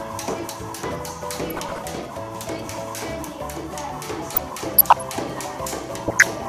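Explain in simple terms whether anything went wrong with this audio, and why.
DAB burbling shows up three times: from 1.40 to 1.82 s, from 4.35 to 5.02 s, and briefly from 6.08 to 6.28 s. Each time the sound is broken up by short blips of noise. Weak digital radio reception let a few corrupted bits in every thousand slip past error correction into the compressed audio. Those errors make individual frequency bands suddenly jump in loudness for a split second, many times in a row.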